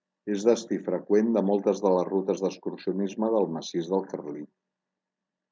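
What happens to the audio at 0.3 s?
Nothing goes wrong at 0.3 s: the speech runs on intact through that moment, carrying only the ordinary sound of call microphone processing, with its trimmed lowest bass and nothing above 8 kHz.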